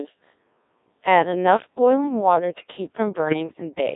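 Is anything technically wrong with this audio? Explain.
Yes, there are two faults.

Throughout, the speech carries the heavy damage of the Codec 2 vocoder. Only pitch, voicing, energy and a spectral envelope survive, and the decoder rebuilds everything from sine waves, so the voice sounds robotic and buzzy. The band runs from 250 Hz to 3.7 kHz, and the degree of damage points to a rate near 1.6 kbit/s.

From 3.26 to 3.35 s, bit errors on digital voice radio corrupt the synthesis parameters. The burst spans roughly two frames at an error rate of a few percent. Each flipped bit alters the pitch, level, voicing or spectrum of a whole frame, so the voice briefly jumps and warbles into garbled synthetic noise.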